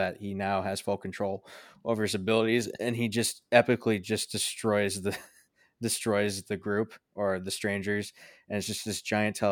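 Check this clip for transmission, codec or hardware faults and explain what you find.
Nothing stood out on listening to this speech recording.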